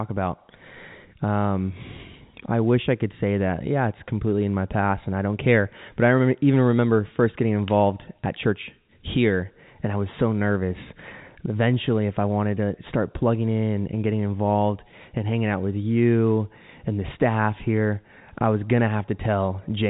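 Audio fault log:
No faults heard.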